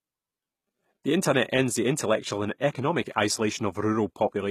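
Speech throughout carries a bright but synthetic-sounding treble, with s sounds turning gritty and metallic and nothing at all above 14.9 kHz. The likely cause is HE-AAC compression at a rate that fits roughly 20 kbps, where the upper band is rebuilt by copying lower bands upward rather than coded directly, so its harmonics no longer line up. From 2.58 to 2.60 s, a brief hiss of about 21 ms leads into an attack that sounds softened and smeared. This is pre-echo: the codec spread quantisation noise across its whole block, so noise meant for the loud onset also filled the quiet moment just before it.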